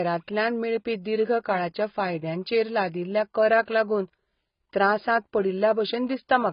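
AAC compression runs throughout this speech: nothing survives above 5.1 kHz and the sound is dull and smeared, likely heavy AAC-LC quantisation at a bitrate fitting 16 kbps.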